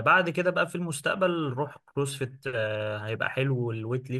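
Speech, with sample clock jitter from 2.69 s to the end: a fine hiss or roughness, roughly 45 dB below the sound, riding on louder and brighter syllables. Unlike a steady noise floor, it disappears in pauses, fitting timing wobble of around a microsecond.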